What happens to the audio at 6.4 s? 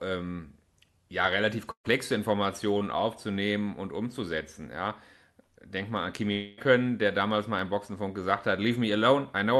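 At 6.4 s the speech breaks up in what is likely a long network dropout. It runs from 6.32 to 6.59 s, right after "mal an". Audio stopped arriving and about 0.26 s of speech was never played. The receiver covered the gap by stretching the last sound into a buzzy, fading tail for about 0.25 s, with no true silence. Speech returns at "der damals mal im", with the lost part gone.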